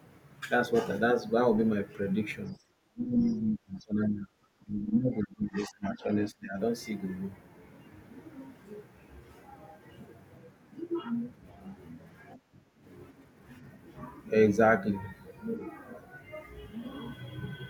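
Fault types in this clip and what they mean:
Other side's voice leaking through: A second, very faint voice appears briefly from 2.47 to 2.63 s, far below the talker's level. This is likely the far end playing on a loudspeaker and slipping past the echo canceller.
Speech suppressed in double talk: The talker's voice sinks by roughly 25 dB from 2.8 to 4.3 s and 4.62 to 6.05 s, then by about 20 dB from 6.3 to 6.57 s. The likely cause is the echo canceller turning everything down while both sides spoke.
Background gated by the echo canceller: The room sound drops by about 16 dB from 12.37 to 12.78 s, then returns. The canceller clamped the microphone hard while the loudspeaker played. It released the microphone afterwards, so the background comes back quickly.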